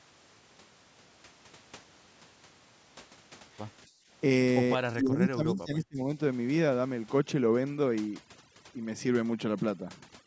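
From 3.87 to 4.08 s the background is gated by the echo canceller. While far-end audio plays, the canceller pulls the microphone down by about 16 dB for roughly a fifth of a second, so the room noise, otherwise sitting about 26 dB below the speech, briefly sinks and then returns.

Between 4.92 and 5.99 s the talker's speech dips by around 20 dB for about a second. This is likely speech suppressed in double talk: with both ends active, the canceller could not separate the local talker from the loudspeaker echo and attenuated both.

From 7.19 s to the end, overdone noise removal takes over. Bands near the noise estimate are cut hard, so the background drops and breaks up into twinkling, warbling specks, and the quieter parts of the speech go with them.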